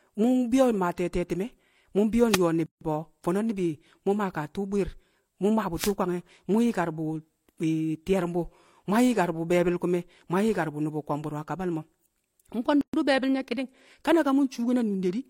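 At 2.28 s, just after "te̱e̱ te̱ti̱me̱ mu̱ mbi̱yo̱", a wireless microphone noise hit lasts about 0.12 s. The radio signal fades as reflections cancel. Receiver noise swells into a brief swish of static over the speech. A second hit runs from 5.75 to 5.94 s, between "tu̱u̱ bwi̱i̱r mu̱ mmaa" and "kwange̱ mu̱".

At 2.66 s a gap at a join of encoded pieces cuts the speech for about 151 ms. Another, about 124 ms, opens at 12.81 s, just before "be̱e̱bi̱l nye̱ ki̱ni̱ng". The joins are 10 s apart. Separately encoded pieces kept their start delay and end padding. The edges are smeared, and the speech resumes where it stopped.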